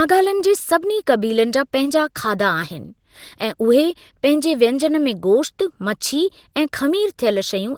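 Opus voice compression runs through the whole speech clip. The band stays wide, with content reaching about 20.2 kHz. The coder splits the work. A linear-prediction layer carries the lower band, and a transform layer codes everything above 8 kHz. The damage is plainly audible. That points to a low budget, around 16 kbps. At that rate the excitation is coded coarsely, so the speech takes on a rough, slightly synthetic grain.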